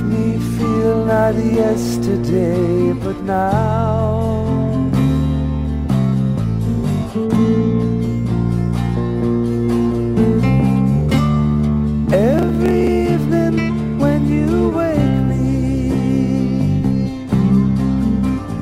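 From 12.34 to 12.88 s, processor overload crackle: the processor repeatedly failed to finish very short buffers, each under a millisecond, in time, and around twenty were skipped outright. Each skip cuts a hard-edged gap, so the sound tears into a gritty crackling burst that stops when the load passes.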